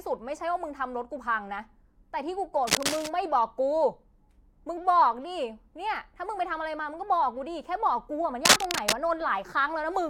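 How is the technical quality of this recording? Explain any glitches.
The speech is marred by two bursts of cable scratch noise. The first runs from 2.67 to 3.08 s. The second runs from 8.45 to 8.93 s. Each is a dense, ragged crackle laid over the speech. The first sits at about the level of the speech. The second is a little louder and pokes above it. The likely cause is a worn cable or connector being moved, its contact resistance jumping rapidly and injecting uneven noise.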